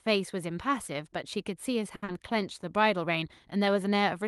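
At 1.95 s a packet arrives late and the jitter buffer runs dry, producing a short stall from a late packet. The receiver holds the last bit of speech for about 70 ms until the packet turns up, then continues from the same spot, so nothing is lost, but the delay grows by 70 ms. Up to 2.04 s, that sound drags on unnaturally, with a faint buzzy, slightly dipping quality.

Straight after, from 2.04 to 2.10 s, comes a short concealed packet loss. About 60 ms of audio never reaches the decoder in time, and the receiver fills 40 ms of it by extending the preceding sound and then blending back into the real signal, pulling the delay back by roughly 20 ms. It comes across as a quick smear or wobble just after the held sound, within a call path whose highs stop near 12 kHz.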